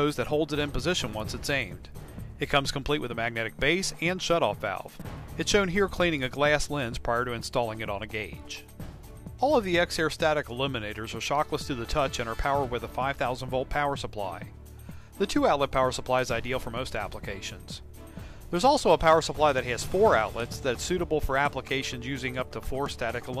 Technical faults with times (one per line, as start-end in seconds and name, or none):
none